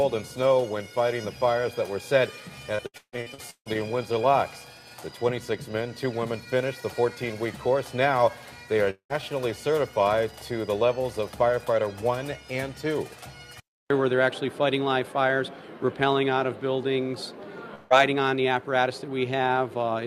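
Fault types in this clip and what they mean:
Repeated packet loss (robotic sound): Audio packets went missing again and again from 2.75 to 3.77 s. Each of the eight holes, the longest about 0.15 s, was filled by stretching the preceding sound, so roughly half that stretch sounds choppy and robotic.
Long network dropout: The incoming stream likely stopped briefly, and the last sound was carried forward as a fading buzz or hiss. From 8.90 to 9.13 s about 0.2 s is lost, ending in about 0.1 s of silence. From 17.74 to 17.93 s about 0.16 s vanishes without silence.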